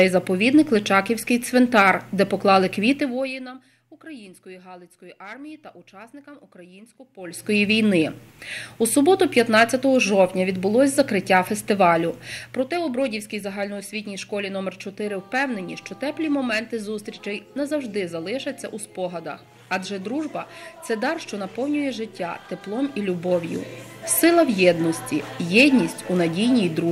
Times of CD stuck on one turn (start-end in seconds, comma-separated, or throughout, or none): none